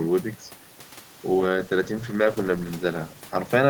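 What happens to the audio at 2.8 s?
A call bitrate drop runs from 1.43 s to the end. The encoder drops to a coarser mode, which fits a fall from 32 to 15 kbps, making the speech sound rough and muffled.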